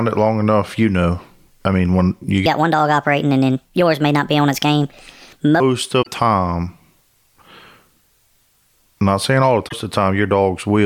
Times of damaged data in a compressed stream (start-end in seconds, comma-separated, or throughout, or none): 5.99-6.07, 9.65-9.73